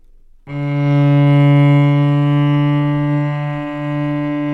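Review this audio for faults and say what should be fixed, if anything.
No faults heard in the audio, so nothing needs fixing.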